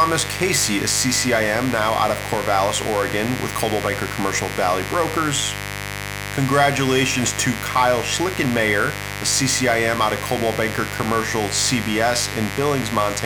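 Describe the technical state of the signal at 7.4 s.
A steady, raspy buzz sits under the speech at 7.4 s, only moderately quieter than the voice. It is mains buzz, present across the whole clip: switching spikes at twice the 50 Hz mains rate leak in, spreading harmonics up to several kHz.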